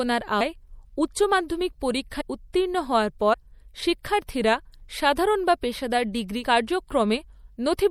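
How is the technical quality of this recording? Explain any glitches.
The recording has audible compression damage throughout and four short dropouts where audio is skipped.

Throughout the speech, the treble is dulled and the sound has a watery, swirling texture, with smeared consonant onsets. The likely cause is MP3 compression at a low bitrate: the damage level fits a 64 kbps encode, where the treble is cut off and weak frequency components flicker on and off between frames.

Compressed frames are skipped at 0.40 s, 2.20 s, 3.33 s and 6.42 s; the last comes just after "বা পেশাদার ডিগ্রি". Each time, whole frames never reach the output, so the speech jumps forward, by roughly 200 ms at 0.40 s, 100 ms at 2.20 s and about 70 ms at the other two. The 24 ms frames overlap, so each join is a brief smeared blip, not a hard click.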